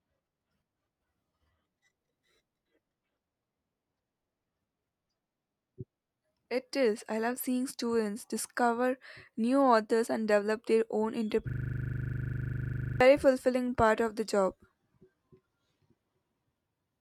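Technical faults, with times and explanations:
11.50–13.01 s, system hang loop: after "and develop their own", a frozen system replays one 40 ms buffer at 25 Hz, a rattling buzz. The waveform shows identical repeated blocks, and the spectrogram shows evenly spaced vertical stripes.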